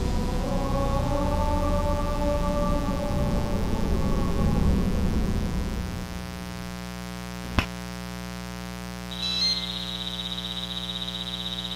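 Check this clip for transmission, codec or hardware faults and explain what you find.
One hardware fault runs through the whole clip: mains buzz on a 60 Hz supply, sitting roughly 10 dB below the sound. Switching spikes leaking in twice per mains cycle spread harmonics up to several kHz, giving a raspy, edged buzz rather than the smooth, low tone of plain hum.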